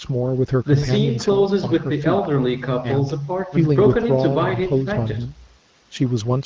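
No technical faults can be heard in this speech recording. The sound carries the band limit of call microphone processing, with nothing above 8 kHz, and the light coding of an AMR wideband (HD Voice) link, which fits a rate of 12.65 kbit/s.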